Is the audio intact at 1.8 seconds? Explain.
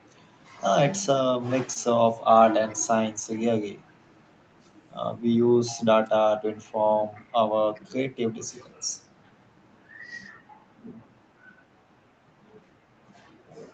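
No. Just before that point, from 1.73 to 1.77 s, there is a short concealed packet loss: about 20 ms of the call never reached the decoder in time, so the receiver extended the preceding sound to fill the gap and blended back into the real signal, leaving a brief smear or wobble.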